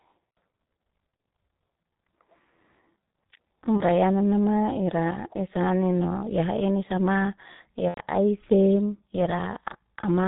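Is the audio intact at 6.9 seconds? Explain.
No. At 6.9 seconds, as across the whole clip, the speech has passed through the G.723.1 codec with heavy damage. This low-rate telephony coder packs the signal into 30 ms frames, keeps nothing above 4 kHz, and refreshes its model of the voice only slowly. The result is muffled, hoarse speech with smeared consonants, a sound consistent with a bitrate of about 6 kbit/s.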